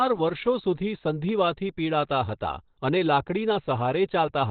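A very low-bitrate encode, likely Opus compression dropped into its SILK speech mode, shapes the whole speech recording. The sound points to a narrowband setting around 12 kbps: nothing reaches above 4.5 kHz, so sibilants and breath lose their edge and the voice sounds boxed in and muffled. Heavy codec damage adds a hoarse, rough grain to voiced sounds across the full clip, with no clean stretch anywhere.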